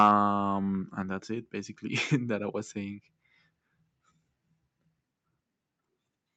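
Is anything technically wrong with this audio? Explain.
Yes. Microphone overload appears right at the start, from 0.00 to 0.11 s. The input was likely set too hot, driving the peaks about 4 dB past what the converter can represent, so their tops are flattened. A few percent of the samples in that stretch were clipped at the converter's limit, giving the opening a harsh, crackly bite. The audio also passed through a call codec band-limited to about 8 kHz, which fits Opus at a moderate bitrate.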